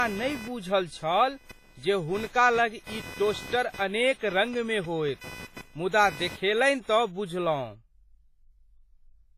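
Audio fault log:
Throughout: WMA compression, likely the cause of the heavy codec damage here. The speech has a ringing, washy quality, and the hiss rises and falls with the signal instead of sitting steady underneath. That's what a transform codec gives you when long blocks smear quantisation noise over tens of milliseconds and weaker spectral lines get dropped entirely. The depth of the damage points to a low bitrate, something like 24 kbps.
0.00 to 6.57 s: computer activity noise, sitting at roughly 20 dB below the speech and pulsing at a rate of around 500 Hz. It follows the machine's workload rather than anything in the speech, coming up and dropping back on its own schedule. Processor, graphics or mouse load shifts the ground the audio circuit shares, and that wobble leaks straight into the recording. It's gone for the last stretch of the clip.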